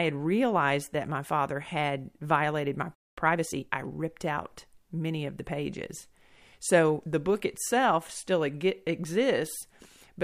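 A speech recording with two linked faults. After "father had violated my", the sound cuts to silence from 2.95 to 3.18 s, a gap of about 0.23 s. This is a playback stall. The likely cause is the player running out of data or its thread being blocked. From 3.18 to 4.10 s, a time-compressed catch-up follows. Playback runs at 1.25 times speed with unchanged pitch. Small pieces are cut out and cross-faded to clear the backlog. Normal pace returns before "out many of the".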